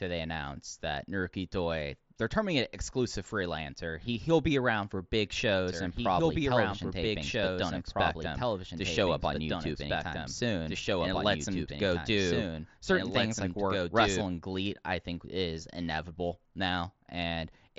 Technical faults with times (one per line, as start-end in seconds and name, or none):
5.67-14.21 doubled audio track